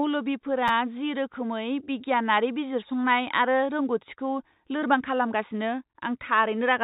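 A repeated buffer at 0.68 to 0.70 s: fresh audio arrived late, so the playback device played the same tiny slice two extra times. Each repeat lasts about 10 ms, which fits a 10 ms buffer, and the hard joins make a brief buzzy click with nothing lost.

Short concealed packet loss at 4.80 to 4.84 s, right after "आरो रोंग'थिखौ": about 20 ms of the call failed to reach the decoder in time. The receiver filled the gap by extending the preceding sound and blending back in, leaving a smear or wobble. All of this sits beneath the call path's normal 4 kHz ceiling, which fits a G.711 mu-law codec.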